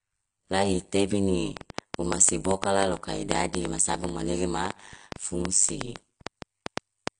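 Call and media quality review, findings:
Overlap-add ripple throughout the speech. Level pumps around 100 Hz, about 60 dB deep. Metallic buzz, extra tones around each note. Frame reassembly overlap not summing to constant gain.

Dull, smeared speech throughout, nothing above 9.8 kHz, warbling texture. Likely AAC compression, AAC-LC at a low rate that fits 32 kbps. Spectral holes from coarse quantisation.

Train of clicks from 1.57 to 7.09 s. Roughly forty uneven ticks, 6.72 per second, peaks about 15 dB over the speech, also in pauses. Likely external interference or faulty connection.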